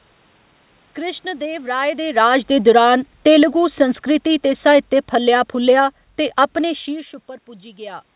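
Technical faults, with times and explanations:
1.71–5.96 s, automatic gain falling: The speech sinks steadily by about 8 dB over roughly four seconds, with the room noise dropping in step, and settles just before "ते अपने शीर्श". The automatic gain control judged the input too loud or its background noise too strong and lowered its gain gradually, so voice and background fall together. The separate level shifts near 2 s and 6.5 s come from the talker moving.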